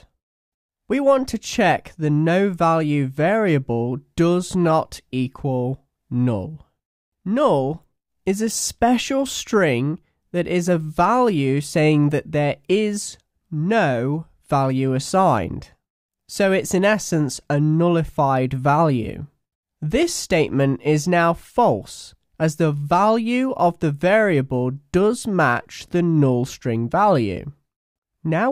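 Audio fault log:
Nothing stood out on listening.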